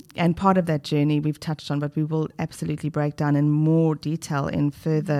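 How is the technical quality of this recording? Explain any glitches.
No glitches turn up anywhere in the recording, and the speech signal comes through intact and continuous, with nothing that points to a problem in capture, processing or transmission.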